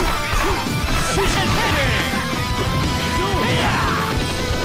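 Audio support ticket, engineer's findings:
Chunks out of order, 1.37–1.71 s. Symptom: brief jumbled passage, about 0.34 s long. Mechanism: one 0.17 s chunk arrived or was written late, so two adjacent chunks play swapped. Probable component: playback or network buffer queue with fixed-size blocks. Differs from a dropout or a repeated chunk: no gap, no duplicated material. All audio is present; only the sequence is wrong, with three hard joins instead of a hole.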